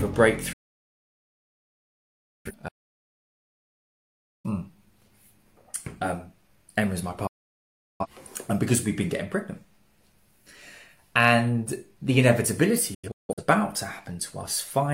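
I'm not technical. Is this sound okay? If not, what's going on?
No, it has real gaps where the sound simply disappears.

The main problem is a digital broadcast dropout, which happens three times. The receiver stopped getting usable data, so it muted itself and came back once good data returned, with a very fast fade of about 8 milliseconds. The first runs from 0.53 to 2.52 seconds, nearly two seconds gone. The second, from 7.27 to 8.06 seconds, loses about 0.7 seconds. The third, from 12.94 to 13.43 seconds, is choppier: several short holes adding up to about 0.3 seconds, the longest about 0.17 seconds.

Right after the first one there's an audio dropout to silence, from 2.69 to 4.44 seconds, about 1.76 seconds of dead, total silence with no background hiss at all. That likely means the input itself was lost for a moment, a loose connection or an accidental mute, while recording kept going. 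Whatever played during those gaps can't be recovered.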